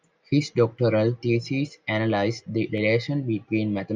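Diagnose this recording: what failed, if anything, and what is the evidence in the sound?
A click recurs every 1.0 s from 0.78 to 3.78 s in the speech, about four in all. That steady spacing, unlike random dropouts, points to clock drift buffer slips at the driver or buffer stage, likely two clocks roughly 150 ppm apart dropping or repeating a few samples each time.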